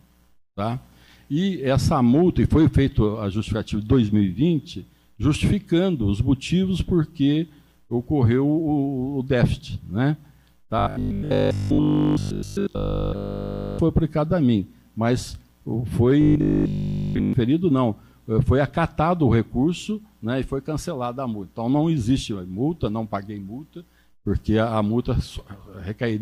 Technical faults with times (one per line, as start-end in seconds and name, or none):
10.79-13.79 robotic sound from repeated short buffers
16.21-17.33 robotic sound from repeated short buffers